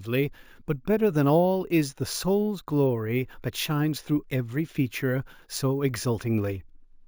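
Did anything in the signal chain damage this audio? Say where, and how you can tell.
Yes. Throughout the speech there is a bright, metallic fizz riding on top of it, rising and falling with the speech's loudness, with a faint upper layer that moves opposite to the speech's pitch. This is imaging from sample-and-hold upsampling at the sample-rate conversion stage. Audio at 16 kHz was raised to 48 kHz by repeating samples without a smoothing filter, so mirrored copies of the spectrum fill 8 to 16 kHz at about 21 dB below the speech.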